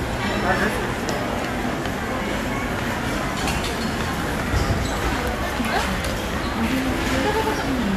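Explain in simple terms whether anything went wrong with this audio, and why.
Nothing went wrong here: the recording of sounds holds steady the whole way, with no technical problems anywhere in the signal.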